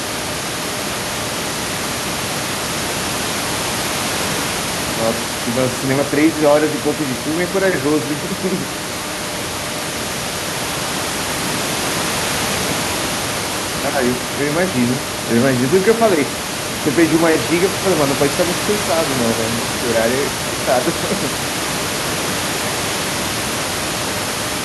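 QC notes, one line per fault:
No faults are heard anywhere in the speech. Room noise from the recording space sits about 7 dB below the voice and belongs to the original recording.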